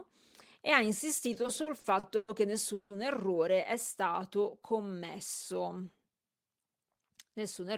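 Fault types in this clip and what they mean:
Repeated stalls (stutter): 1.33 to 2.29 s, after "e ha", the buffer kept running dry, so ten gaps, the longest 120 ms, were filled with stretched sound, about 300 ms in all.
Call audio freeze: 2.73 to 2.91 s, just before "errore è", the sound hangs for 170 ms as a fading continuation, likely because held-up packets emptied the buffer.
Jitter buffer slow-down: 4.12 to 4.88 s, after "errore è", repeated pitch periods add 67 ms, so the speech drags at 92% speed without changing pitch.
Jitter buffer speed-up: 6.76 to 7.68 s, small pitch-period pieces are cut, about a tenth of a second in total, so the speech hurries at 108% speed with unchanged pitch.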